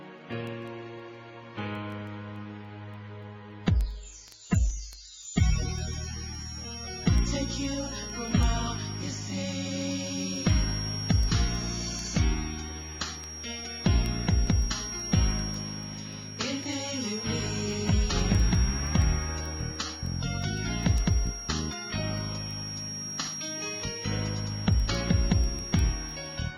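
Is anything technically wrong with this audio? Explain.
Yes. From 5.32 s to the end there is a feedback whistle: a thin, steady tone at 5.6 kHz sitting about 10 dB below the main sound and slowly swelling and fading in level. The likely cause is a loudspeaker-to-microphone loop held just at the edge of instability, so one frequency keeps ringing without building up. Unlike full feedback howl, it never runs away, and its slow level drift separates it from a fixed electronic tone.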